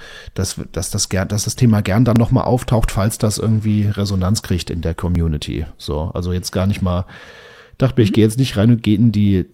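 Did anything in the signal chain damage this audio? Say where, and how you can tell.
Yes: tiny skips at 2.16, 5.15 and 8.15 s, every 3 s, each losing a few milliseconds, likely audio missing between chunks in the recording buffer; waveform shows abrupt butt-joins, spectrogram vertical lines.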